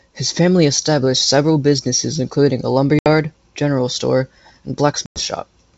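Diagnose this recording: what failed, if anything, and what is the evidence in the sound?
Network stage: packet loss on an ADPCM call through the G.722 path. Silent holes of 70 ms at 2.99 s and 100 ms at 5.06 s show as clean vertical blanks on a spectrogram. After each, the speech returns slightly distorted as the decoder's predictor and step size resynchronise.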